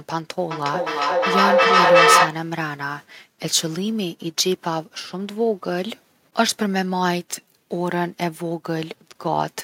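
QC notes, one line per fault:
0.51–2.46 s, feedback echo between two devices: the speech returns at a fixed spacing of roughly 0.4 s, each pass thinner and more ringing, and peaks at about 9 dB above the direct speech, so the repeats build up instead of fading. A second device in the room plays this microphone's signal back into it, and the echo canceller only removes its own playback, so the loop keeps recirculating.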